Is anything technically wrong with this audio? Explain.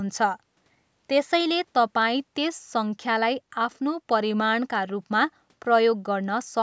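No, nothing's wrong with this speech: it has simply passed through a call's microphone processing, so the lowest bass is trimmed and nothing sits above 8 kHz, which is just how that path normally sounds.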